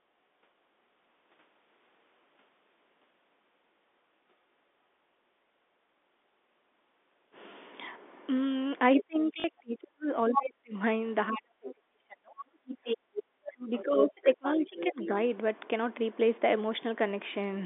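From 8.98 to 10.74 s the talker keeps dipping and breaking up, down by around 40 dB at worst and for about a second and a half in total. That's speech suppressed in double talk: most likely the echo canceller heard both ends at once, couldn't tell the near voice from the loudspeaker echo, and pulled the whole lot down, so the voice gets chopped into pieces rather than fading smoothly.

Inside that stretch, at 9.40 to 9.44 s, there's a quick robotic stutter. That's packet loss with the last packet repeated: 40 ms of audio went missing and the receiver looped the previous chunk to fill the hole, which fits two 20 ms packets. The loop doesn't line up with the pitch period, hence the buzzy, glitchy edge.

At 10.31 to 10.37 s a short scrap of a second voice pokes through at about 5 dB under the talker. That's the other side's voice leaking through, likely echo from the loudspeaker that the canceller didn't fully strip out of the mic.

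The double-talk suppression comes back from 11.31 to 12.36 s, again reaching about 40 dB down, for roughly a second of chopping.

At 12.64 to 12.68 s the room sound ducks by about 16 dB for a moment and then recovers. That's background gated by the echo canceller: it clamped the mic hard while the far end was playing and let go almost straight away. It comes across as a brief hole in the ambience.

Straight after, from 12.68 to 14.37 s, the other side's voice leaks through for a longer stretch, sitting about 5 dB under the talker.

Overlapping that, from 13.12 to 15.10 s, the talker gets suppressed in double talk once more, about 25 dB down at worst and around a second and a half in total.

A last, quieter bit of leakage runs from 14.78 to 15.35 s, about 15 dB under the speech. All of it sits within the usual narrow G.711 telephone band.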